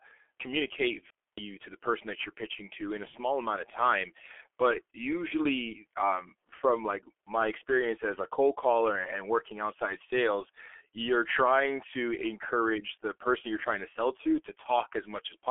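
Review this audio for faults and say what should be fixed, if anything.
The speech runs through the G.723.1 codec for the whole clip, with heavy damage. At about 6.3 kbit/s the coder rebuilds each 30 ms frame from a coarse model of the vocal tract, so consonants smear and the voice turns hoarse and muffled. The path also sits on a 300 to 3400 Hz telephone band. On a spectrogram, energy stops abruptly near 3.5 kHz, with blurry, frame-stepped harmonics below. Prevention: carry the call over a wideband codec at a higher bitrate.

A digital wireless dropout cuts the audio from 1.10 to 1.38 s, a mute of about 276 ms just before "to the person that". The receiver lost too much data to decode and faded itself to near silence almost instantly, so there is a clean hole with no crackle or noise burst on either side. The waveform shows a flat line with short, smooth ramps at each edge, and the spectrogram shows a blank vertical gap. 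Prevention: improve the radio link by shortening the distance, clearing line of sight, or moving to a less congested channel.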